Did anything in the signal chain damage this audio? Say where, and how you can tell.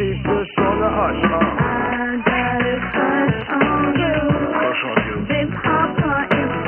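No, nothing in the signal chain left an audible mark on this audio. No stage from capture through to playback shows any damage.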